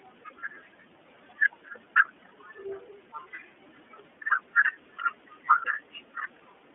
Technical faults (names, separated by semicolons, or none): iLBC codec; lost iLBC frames